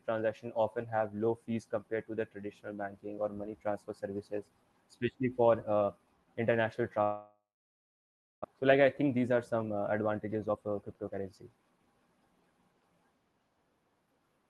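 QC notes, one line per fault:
7.03–8.46 s, long network dropout (likely cause): after "uh international" the last sound smears into a fading buzz, then about 1.0 s of silence; a section is lost, unlike brief concealed packet loss.
8.54–11.95 s, jitter buffer speed-up: speech runs at 111% with pitch unchanged as short pitch-period pieces are trimmed, shedding roughly 0.4 s of built-up delay; resampling would raise pitch instead.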